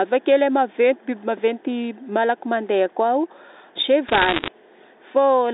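From 4.08 to 4.48 s, bit errors on a digital phone line flip roughly one to two percent of bits in the G.711 stream. Each corrupts one sample, so sharp ticks pile into crackle over the narrowband speech.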